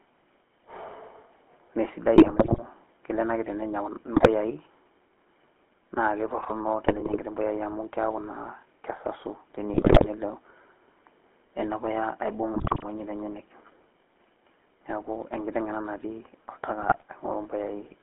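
The whole clip runs through the GSM full-rate codec: pulse-driven vocal-tract modelling, on a line band of roughly 250 Hz to 3.4 kHz, leaves a plainly buzzy, gravelly roughness that fits 13 kbps full-rate coding. Then GSM bit errors hit at 2.16 to 2.59, 4.16 to 4.29, 6.82 to 7.21, 9.74 to 10.07, 12.54 to 12.85 and 16.80 to 17.04 s. Corrupted decoder parameters bend the spectrum and level, so the speech squawks, pops and gargles.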